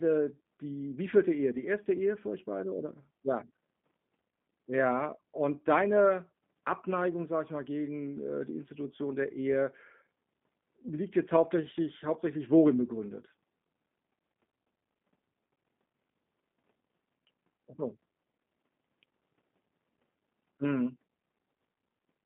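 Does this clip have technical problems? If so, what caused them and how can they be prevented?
Yes, the whole speech clip carries clear G.729 codec damage: it's squeezed into a phone band of about 150 Hz to 3.5 kHz, and the sound is rough and a bit synthetic. That fits an 8 kbit/s G.729A stream, where the encoder rebuilds speech from a vocal-tract filter, a pitch predictor and a few pulses per frame. To avoid this, record or route the call over a wideband codec such as Opus or G.722.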